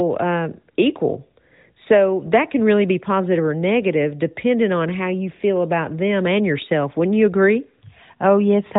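No technical faults can be heard in this speech recording.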